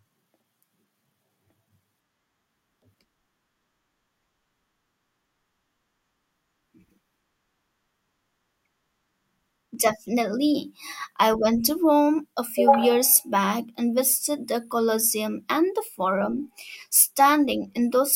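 At 9.75 s the stream likely lost a handful of samples, a fraction of a millisecond's worth, so the waveform jumps straight from one value to a later one with nothing joining them. That is the dropped samples fault. The gap is far too brief to remove any of the speech. What remains is the discontinuity itself: a single sharp click, seen in the spectrum as a thin vertical line running across all frequencies.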